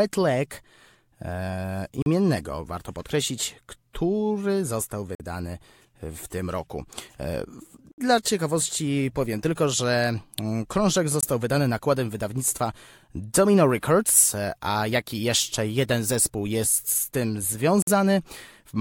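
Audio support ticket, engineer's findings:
Speech cuts to silence five times: 2.02, 5.15, 7.92, 11.21 and 17.82 s. Gaps are 21 to 65 ms. Playback then resumes. Bluetooth stall, likely. Interference delayed packets, the headphone buffer ran dry, and playback paused until resent packets arrived.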